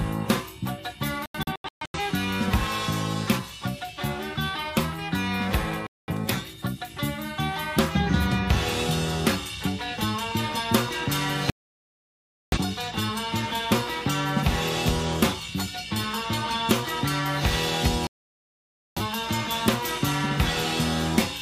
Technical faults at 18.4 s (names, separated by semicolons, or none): digital broadcast dropout